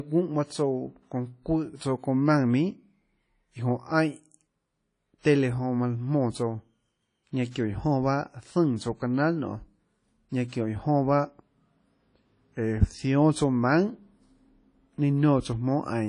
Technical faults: WMA compression; pre-echo

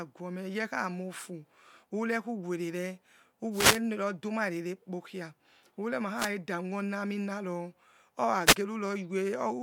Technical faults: wireless microphone noise hit

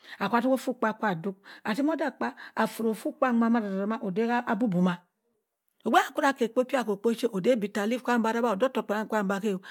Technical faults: none

